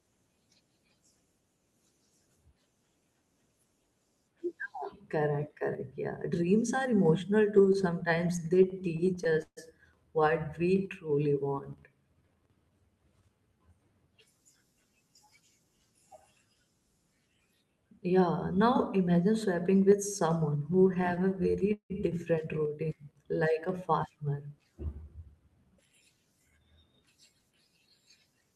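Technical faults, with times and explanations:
7.57–9.59 s, repeated stalls (stutter): 22 buffer underruns, longest 143 ms, were bridged by extending the last sound. The spectrogram shows smeared, frozen harmonic bands and the waveform shows repeated cycles.
12.14–12.71 s, jitter buffer speed-up: pitch-period cuts removing about a tenth of a second play this stretch at 114% speed. Harmonics stay level on the spectrogram while syllables crowd closer together.
20.73–21.92 s, repeated stalls (stutter): 15 gaps, longest 168 ms, were filled by continuing and fading the preceding sound, a quarter of the span. The spectrogram shows flat, blurred stretches and the waveform shows copied periods with dipping envelopes.
24.85–26.65 s, jitter buffer speed-up: repeated small cuts totalling about 0.3 s hurry the sound to 113% speed at unchanged pitch. The waveform looks compressed in time, without visible gaps.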